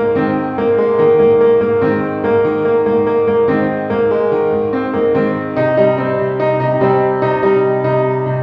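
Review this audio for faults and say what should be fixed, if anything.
Nothing here needs fixing, since no faults turn up anywhere in the clip.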